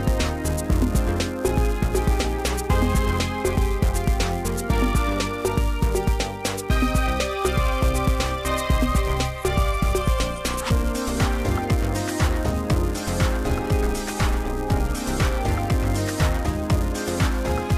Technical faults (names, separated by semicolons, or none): filter restarted on every block